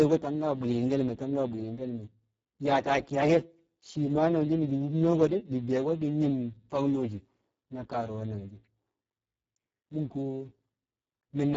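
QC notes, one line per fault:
Throughout: Speex codec, heavy damage. The speech sounds hoarse, buzzy and partly robotic, with a rough, noisy grain over every syllable. This fits a very low Speex setting, around 6 kbps, where the CELP coder has too few bits to model the excitation and falls back on coarse, vocoder-like pulses and noise. Nothing is present above 7.7 kHz, and the upper band sounds like a smeared, noise-like fill.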